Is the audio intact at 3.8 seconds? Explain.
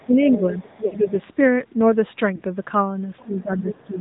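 No. Speech suppressed in double talk runs from 3.22 s to the end: the voice dips by roughly 15 dB, likely because an echo canceller mistook simultaneous talk for echo. The AMR narrowband mobile codec at 10.2 kbps also runs throughout, cutting everything above 4 kHz and leaving the voice audibly buzzy and synthetic.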